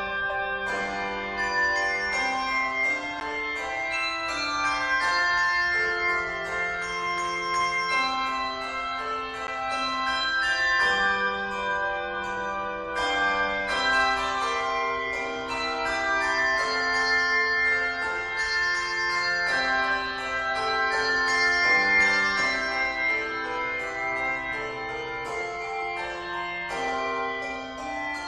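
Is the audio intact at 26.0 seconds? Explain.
Yes, at 26.0 seconds the audio plays through intact, with no dropout, click, distortion or other fault to be heard at that moment.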